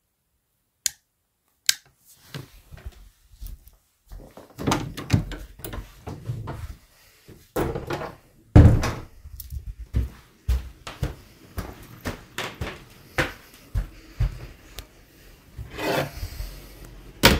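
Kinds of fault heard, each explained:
Hard clipping: at 1.69 s and again from 8.56 to 8.67 s, the sound is driven about 7 dB beyond what a stage can pass, so its peaks are sliced flat, adding high harmonics heard as a brief crackle, then a longer one.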